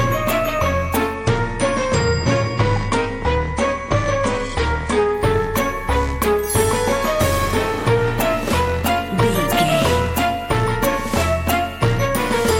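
From 1.14 s to 5.14 s the audio abruptly goes dull, with nothing above about 9.8 kHz and thicker codec artefacts, then snaps back with no gap. That's an adaptive stream at a lower bitrate, sounding like a temporary fall from roughly 96 to 32 kbit/s AAC.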